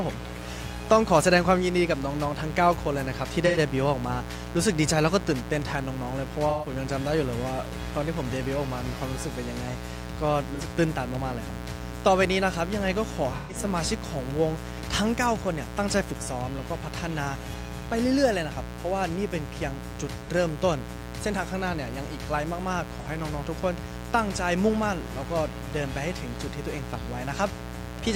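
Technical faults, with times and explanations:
Throughout, mains buzz: a steady, raspy 60 Hz buzz sits under the audio at roughly 10 dB below the signal, which makes it prominent. It comes from sharp switching spikes, such as those from a dimmer, rectifier or an unshielded run, entering at twice per mains cycle. Those spikes carry a dense series of 60 Hz harmonics up into the kilohertz range, which gives the buzz its rasp rather than a smooth hum.
3.46–3.58 s, 6.49–6.69 s, 10.55–10.61 s, 13.36–13.56 s, 20.23–20.30 s and 23.00–23.07 s, AAC frame loss with concealment: each gap is a short smeared, noisy patch where coded frames went missing and the decoder patched the hole from the last good spectrum. The lost spans are 85 ms, 128 ms, 43 ms, 128 ms, 43 ms and 43 ms, which fits runs of one to three frames.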